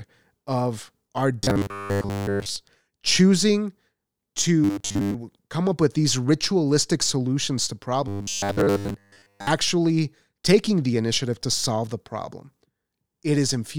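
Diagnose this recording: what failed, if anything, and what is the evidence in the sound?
Robotic sound from repeated short buffers appears from 1.42 to 2.56 s, 4.64 to 5.14 s and 8.08 to 9.47 s. The speech becomes a rigid, metallic buzz locked at 100 Hz, and most of the real audio in those stretches goes missing. The likely cause is a driver or buffer stage starved of input, re-sending its last block each time new audio was late. A 100 Hz buzz fits a block about 10 ms long.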